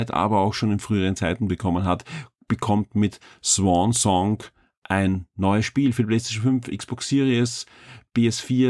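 No faults can be heard anywhere in this speech.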